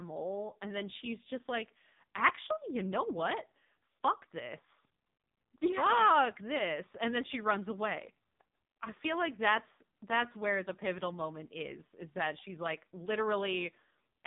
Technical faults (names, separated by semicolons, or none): AMR narrowband mobile codec